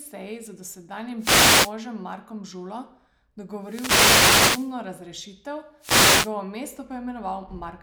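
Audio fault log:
1.18–1.74 s, 3.61–4.75 s, 5.79–6.33 s: wireless microphone noise hits, bursts of static swish as the radio signal fades and receiver noise rises over the speech; on a spectrogram, broadband noise bands over the voice harmonics, with raised, ragged noise filling the waveform.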